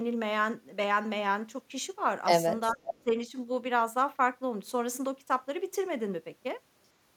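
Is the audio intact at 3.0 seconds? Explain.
No. From 2.85 to 2.95 s there is an echo leak: a faint, delayed copy of the speech, about 10 dB below it and lagging by 341 ms, likely from a far-end echo canceller that let some of its loudspeaker pickup return down the line. Right after, from 3.02 to 3.14 s, the speech is suppressed in double talk. The level dips by around 15 dB and comes back within roughly a tenth of a second, likely because the canceller treated the overlapping talker as echo and attenuated both.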